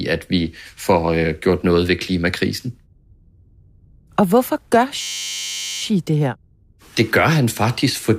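A system hang loop runs from 5.01 to 5.81 s. The computer or audio driver stalled, but the sound hardware kept replaying the same small ring buffer, so one 10.67 ms slice of the speech repeats exactly, over and over. A loop that short becomes a steady buzz at about 93.8 Hz, which fits a 512-sample buffer at 48 kHz. Once playback resumes, little or no audio seems to be missing.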